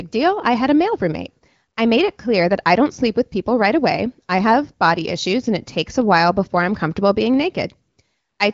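The speech carries no technical faults, with its band stopping near 7.3 kHz as expected of the AMR wideband (HD Voice) codec, and the light coding texture fits a rate of about 15.85 kbit/s.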